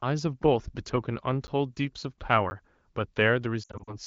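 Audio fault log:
1.47 s and 2.50 s: block of digital silence. Each is a 10 ms hole dropped to silence with no fade, heard as a tick; the waveform shows a flat gap with sharp edges.
3.63 to 3.95 s: lost AMR speech frames. About 140 ms of lost audio is scattered over 240 ms, with the longest run 60 ms. The wideband decoder repeats the last good settings with falling gain, so the sound warbles, dips and returns rough. The spectrogram shows smeared, fading bands.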